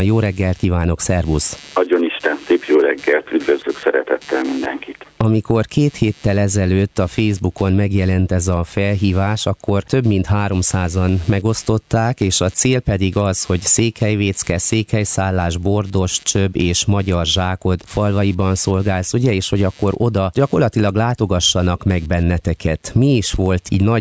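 Computer activity noise runs through the whole clip: a buzzing, chirping layer pulsing at around 150 Hz, roughly 35 dB below the main sound. Unlike steady mains hum, it flickers and shifts with the computer's load as the processor, graphics or mouse disturb the shared ground, not with the audio itself.

Gain pumping is also present throughout, with the level swinging by around 10 dB. That swing is likely caused by gain set far too high, with a fast limiter clamping down on each peak. The result is squashed dynamics, unlike plain noise, whose level stays fixed. The call path's microphone processing, with nothing heard above 8 kHz, sits underneath both.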